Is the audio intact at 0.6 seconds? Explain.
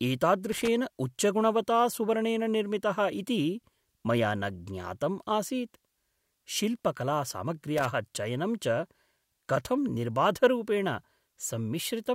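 No. A loose connector crackle runs from 0.52 to 0.68 s. A worn or dirty contact in the signal path is making and breaking as it shifts, so the speech is chopped on and off over that span. The result is an irregular, scratchy burst of crackle lasting about 0.15 s, ending just before "उच्चगुणवता सुवर्णेन".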